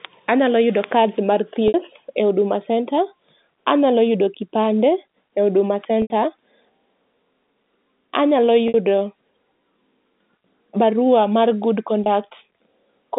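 At 1.68, 6.02, 8.68 and 12.04 seconds, the speech shows packet loss with pitch repetition. Audio went missing for 60, 80, 60 and 20 ms, which fits three, four, three and one lost 20 ms packets. The receiver bridged each gap by repeating the last pitch period and fading it out. The 20 ms dropout sounds like a brief held, buzzy tone, while the longer ones fade into silence. The speech then returns with a short cross-fade. All of it sits within the narrow telephone band.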